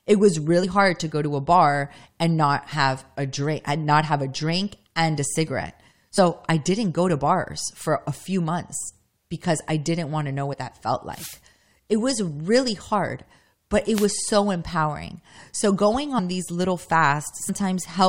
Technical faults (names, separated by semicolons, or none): compressed frames skipped; wireless microphone noise hit